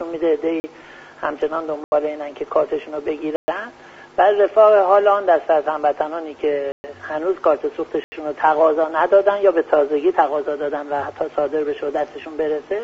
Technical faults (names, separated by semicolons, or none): block of digital silence